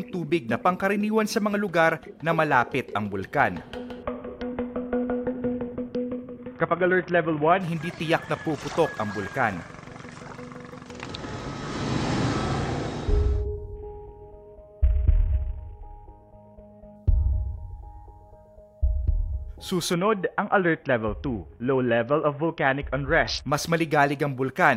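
From 4.03 to 7.61 s, 13.76 to 16.96 s and 19.93 to 23.49 s, a Bluetooth SBC bit pool drop dulls the treble and lays a gritty noise over the sound. The sound fits a link cutting the bit pool from 31 to 6, near 55 kbps. With so few bits, the upper sub-bands go silent and the rest are coarsely quantised. A spectrogram shows the top band abruptly blanked, with grainy smearing beneath, in each span.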